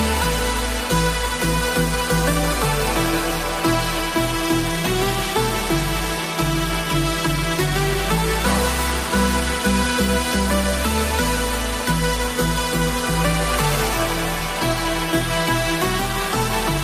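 No technical faults are audible.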